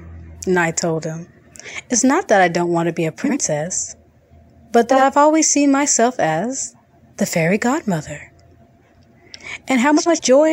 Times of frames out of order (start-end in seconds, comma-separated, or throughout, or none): 3.23-3.37, 4.90-5.03, 9.97-10.19